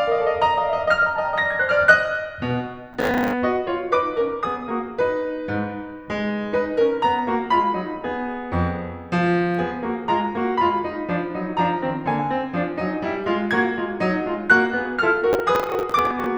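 Processor overload crackle breaks into the music twice, from 2.93 to 3.33 s and again from 15.33 to 16.26 s. The processor keeps missing its deadlines on buffers of around 10 ms, around twenty times each time, and each miss replays stale audio with hard edges, giving a gritty, tearing crackle.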